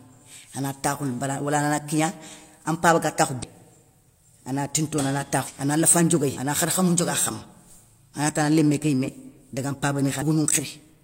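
Compressed frames skipped at 3.39, 5.44, 6.34, 8.09 and 10.18 s: whole 42.7 ms frames never reach the output, so the speech jumps ahead by roughly 300 to 700 ms each time. After "ana lafa" at 6.34 s, it lurches forward.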